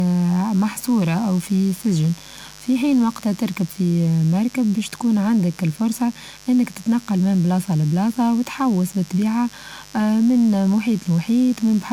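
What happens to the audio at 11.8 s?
At 11.8 s the speech carries a steady mains buzz, as it does for the whole clip. Switching spikes from a dimmer, rectifier or unshielded lead enter twice per 50 Hz cycle. They stack up harmonics of 50 Hz that climb into the kilohertz range. The result is a raspy, constant buzz. It sits roughly 25 dB under the speech.

The same moment also sounds swirly, smeared and hollow, and consonant attacks blur. This also runs through the whole clip. The likely cause is generation loss. The audio seems to have gone through an MP3 codec at 128 kbit/s around five times. Each new pass quantised on a shifted frame grid. Noise and spectral gaps built up with every round. Nothing remains above 20 kHz.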